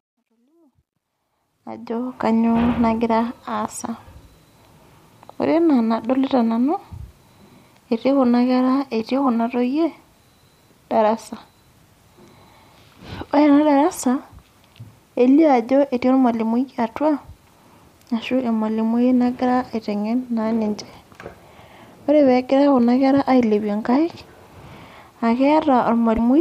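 From 0 to 2.28 s, the speech fades in with truncation distortion: the fade stage keeps too few bits and adds no dither, which fits roughly 12-bit resolution. Up to 0.9 s the waveform shows coarse square steps and the spectrogram broadband grit, heard as a gritty sound.

From 26.14 to 26.19 s, damaged data in the compressed stream makes the decoder lose sync and hunt for the next frame. It is heard as a brief glitch, a vertical smear on the spectrogram and a discontinuity in the waveform.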